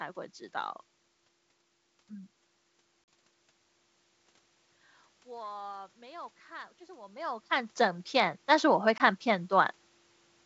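At 3.04 to 3.08 s there is packet loss on an ADPCM call: 40 ms, about two packets, drops out as a hard-edged silent gap. On resumption the receiver's adaptive predictor and step size no longer match the sender's, so the sound comes back slightly distorted before it resyncs within some tens of milliseconds.

From 5.24 to 9.79 s the automatic gain is rising. The input falls by about 21 dB, and the gain control responds by slowly adding about 8 dB, so the voice and room noise swell together over several seconds instead of stepping up.

At 8.98 s, within that gain ramp, a second ADPCM packet loss of 20 ms, consistent with a single packet, leaves a shorter silent hole followed by the same mistracked return while the decoder state catches up.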